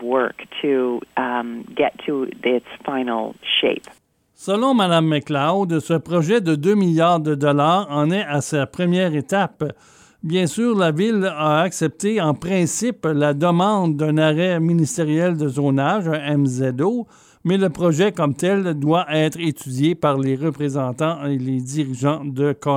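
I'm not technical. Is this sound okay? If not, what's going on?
Yes, this sound is okay, and there's nothing going on that needs fixing.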